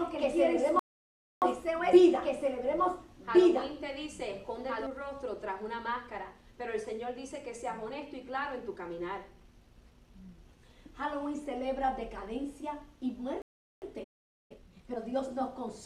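From the very start there's a doubled audio track: a second full-band copy trailing about a second and a half behind, roughly as loud as the original, with no decay or room colour. It's likely a second capture path or a misaligned edit, and it drops out abruptly at 4.87 s.

Inside that stretch, from 0.79 to 1.42 s, there's a rebuffering stall. The player ran dry, went silent, and then picked up exactly where it stopped. Nothing is missing, but about 0.63 s of dead air gets added.

A second rebuffering stall runs from 13.42 to 13.82 s, the same thing on a smaller scale. The sound cuts to silence and resumes seamlessly from the same spot, adding roughly 0.4 s.

Right after that, from 14.03 to 14.52 s, comes a playback stall. The sound halts in mid-flow for just under half a second. The likely cause is the output starving for data or its thread getting blocked before it recovered.

The player then clears the backlog with time-compressed catch-up from 14.52 to 14.98 s. 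Small pieces are cut out and cross-faded so the audio runs at double speed but keeps its normal pitch, which gives a hurried feel.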